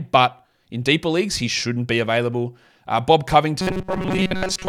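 A speech clip whose final stretch, from 3.60 s to 4.69 s, turns into a rigid, metallic buzz fixed at 188 Hz that only loosely tracks the speech. This robotic sound from repeated short buffers likely comes from audio arriving too seldom, with the last roughly 5 ms replayed to fill most of that stretch while real audio is skipped.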